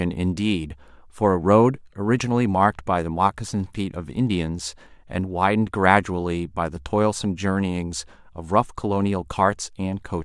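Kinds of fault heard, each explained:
No technical fault can be heard anywhere in this speech recording. There are no dropouts, repeats or sudden changes in the sound to point to.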